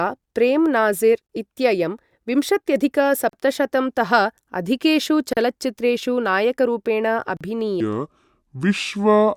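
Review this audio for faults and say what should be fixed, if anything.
Four short silences break the speech at 1.27, 3.29, 5.33 and 7.37 s, one every 2.0 s. These are gaps at joins of encoded pieces. The first lasts about 27 ms and the others about 38 ms each. Each segment was encoded separately, and the encoder's start delay and end-of-frame padding were left in. The waveform shows flat stretches with slightly smeared edges, and the spectrogram shows thin vertical blank bands. Trim encoder delay and padding, or encode the whole stream in one pass.

From 7.80 s to the end, the speech plays at about 0.67 times its original speed. This section at the wrong speed sounds slow and deep, roughly seven semitones lower, with pitch and tempo falling together at that moment. The likely cause is that this part was resampled or played against the wrong clock. On the spectrogram, the harmonics and formants shift downward and syllables stretch out in time. 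In the waveform, the cycles get visibly longer. Check that every section is tagged with and played at its true sample rate.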